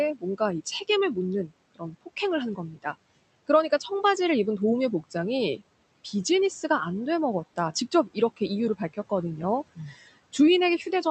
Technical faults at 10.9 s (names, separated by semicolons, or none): none